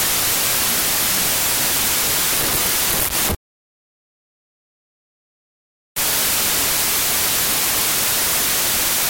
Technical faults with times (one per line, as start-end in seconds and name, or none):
0.00-9.09 wrong sample width